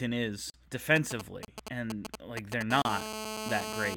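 A block of digital silence at 0.50 to 0.54 s drops 40 ms of the speech to zeros, likely because the output buffer was not filled in time, leaving a short hole.

GSM signalling bursts run from 0.96 to 2.63 s: a nearby 2G phone sending brief groups of radio bursts is rectified by the audio circuit, producing a galloping dit-dit-dit of short 217 Hz buzzes, nearly as loud as the speech.

Another block of digital silence, 30 ms long, falls at 1.45 to 1.48 s.

GSM phone buzz follows from 2.71 to 3.95 s, a steady, raspy 217 Hz buzz rich in harmonics from a phone transmitting in bursts 217 times a second during a call, about 6 dB below the speech.

A third 30 ms block of digital silence at 2.82 to 2.85 s falls beneath that buzz.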